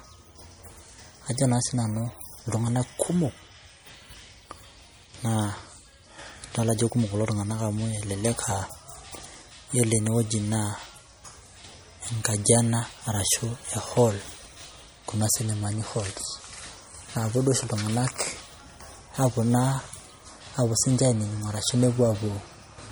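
Throughout the speech, compression damage is plainly audible. Quieter spectral detail seems to flicker in and out from one short block to the next, giving a watery, swirling texture, with a metallic chirp on s sounds and softened consonant onsets. The treble stops at about 21.2 kHz, with nothing above that. The likely cause is MP3 compression, with the bit starvation pointing to a low rate near 48 kbps.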